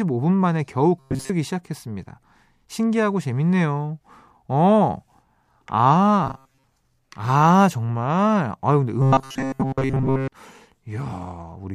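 Robotic sound from repeated short buffers occurs at 1.00 to 1.30 s, 6.24 to 6.64 s and 9.02 to 10.32 s: a rigid metallic buzz near 134 Hz, likely from audio arriving too seldom, so a roughly 7.5 ms chunk repeats over most of each stretch.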